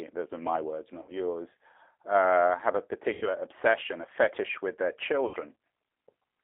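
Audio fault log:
throughout: G.729 codec. The sound is squeezed into a line band of about 300 Hz to 3.5 kHz, so it is dull and thin. At 8 kbit/s the speech is rebuilt from a vocal tract filter, a pitch predictor and a few pulses per frame. That makes it plainly rough and synthetic.
1.02–1.14 s, 3.13–3.31 s, 5.28–5.37 s: VoIP packet loss concealed by the speech codec. The gaps come after "my words", between "uh have a" and "obsession a fetish with", and after "a fetish with their". About 60 ms, 90 ms and 60 ms of audio are lost. The decoder stretches its last pitch and filter into a buzzy tone or coloured noise that fades. Because each frame builds on the last, the speech stays weak briefly afterwards.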